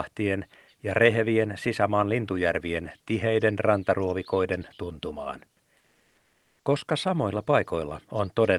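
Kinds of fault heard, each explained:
Comfort noise in place of the background: transmission likely paused after "lintujärvien tiheiden rantaruovikoiden tuntumaan", so for 880 ms a steady, featureless synthetic noise about 2 dB quieter stands in for the real background.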